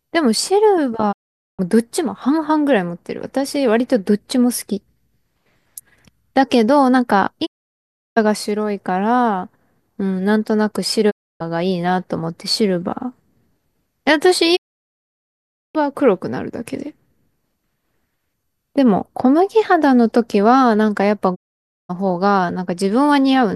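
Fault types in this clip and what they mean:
Digital broadcast dropout: the receiver stopped getting usable frames and muted until clean ones returned. Five times, the speech fades out over about 20 ms into silence, at 1.11–1.61 s, 7.45–8.18 s, 11.09–11.42 s, 14.55–15.77 s and 21.34–21.91 s. The gaps last from 0.29 s to 1.18 s. Their lengths step in multiples of about 24 ms, which fits whole lost audio frames. The speech sent during each gap is gone.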